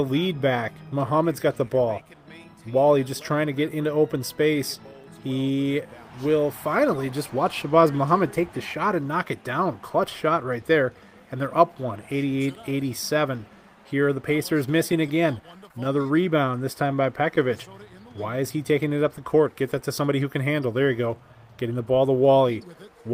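From 14.43 to 16.19 s there are scattered short gaps: about ten small holes where packets were lost or arrived too late, the longest around 15 ms. The receiver filled each one by extending the preceding sound, concealing roughly 100 ms in all, about 7 percent of that stretch. The audio stays clear but picks up a string of brief ticks and small smeared hiccups.

Right after, from 16.21 to 16.96 s, a jitter buffer slow-down sets in. With its reserve running short, the receiver repeatedly duplicated single pitch periods and fragments of quiet to rebuild it, adding 62 ms. Playback runs at 93 percent speed with the pitch unchanged, so sounds are drawn out slightly.

From 19.89 to 20.54 s the opposite happens in a jitter buffer speed-up. The buffer held more audio than its target, so the receiver cut short pieces of one or a few pitch periods in quick succession, removing about 70 ms. The passage plays at 109 percent speed at the original pitch and sounds noticeably hurried.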